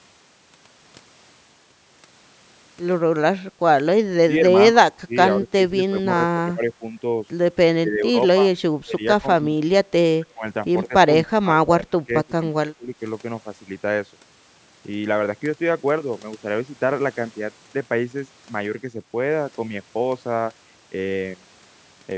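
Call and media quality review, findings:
Speech suppressed in double talk: near-end speech dips by about 20 to 25 dB or chops out at 4.25–6.83, 7.79–8.49, 8.84–9.64, 10.19–10.45 and 10.88–12.92 s. The likely cause is echo canceller suppression during overlap.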